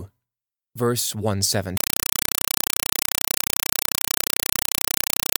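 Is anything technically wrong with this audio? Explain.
Yes. From 1.77 s to 5.39 s, a compressed stream is played as audio. Undecoded Dolby Digital data, consistent with 192 kbps AC-3, replaces the speech with loud chattering static: 4 ms noise bursts repeating 31.25 times a second.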